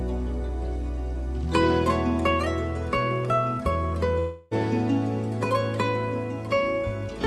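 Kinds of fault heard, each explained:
long network dropout: From 4.19 to 4.53 s the sound stops moving forward and turns into a smeared, buzzy continuation of the moment before, lasting about a third of a second and never falling to silence before the real audio resumes with that stretch missing. The likely cause is a burst of lost packets on the call path, with the receiver's concealment stretching the last sound to cover the hole, heard within a band that tops out around 12 kHz.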